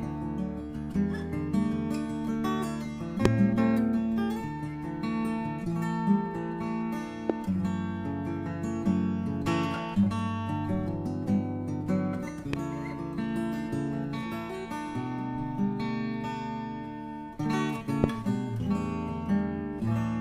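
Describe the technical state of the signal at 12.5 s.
A likely voltage spike, from a plug, switch or static discharge, enters the signal at 12.53 to 12.56 s, producing a single loud pop roughly 15 dB above the sound, which continues underneath.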